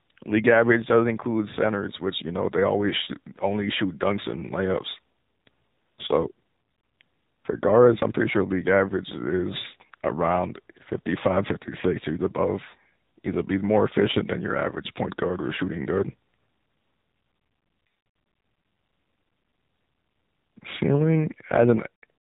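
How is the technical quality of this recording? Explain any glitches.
The recording is compromised by plainly audible mobile-codec processing throughout. AMR narrowband mobile codec damage runs through the whole clip: everything above 4 kHz is gone, and the vocal-tract model, driven by 2 to 10 pulses in each 5 ms, leaves the speech plainly buzzy and synthetic, which fits a low rate around 7.4 kbps.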